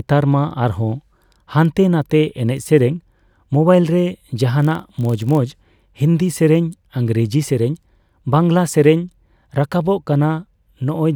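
From 4.58 s to 5.40 s, just after "ᱮᱱᱮᱡ ᱥᱮᱨᱮᱧ ᱢᱚᱵᱟᱭᱤᱞ ᱨᱮ", there is a block size mismatch (padded). One stage hands over slightly shorter blocks than the next expects, so each block is topped up with a sliver of silence. Those tiny gaps repeat at 46.9 Hz, which fits a 1024-sample read, and give the speech a low buzz. The timbre holds, and the slowdown is only a factor of 0.999.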